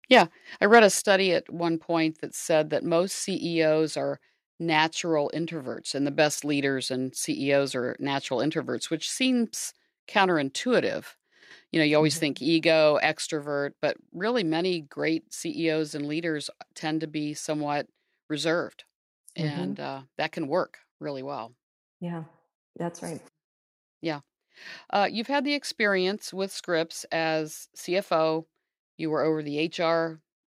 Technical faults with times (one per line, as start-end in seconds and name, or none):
0.13-0.21 microphone overload
0.73-0.77 microphone overload
1.02 microphone volume stepped down
12.24 microphone volume stepped down
13.26 microphone volume stepped down
23.25 microphone volume stepped up